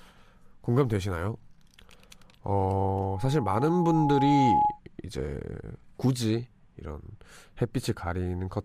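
From 2.81 s to 4.79 s the speech is overtaken by loudspeaker feedback squeal: the microphone is hearing its own loudspeaker, and at 838 Hz the loop gain tops unity, so that tone feeds on itself. It swells over roughly a second and a half into a steady whistle that ends up a few decibels louder than the speech. A spectrogram shows a single bright horizontal line at 838 Hz thickening across that span, and the waveform's envelope swells accordingly.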